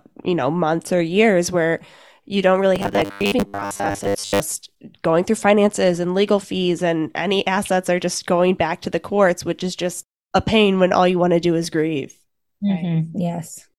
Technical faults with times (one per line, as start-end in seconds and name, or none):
2.76-4.41 robotic sound from repeated short buffers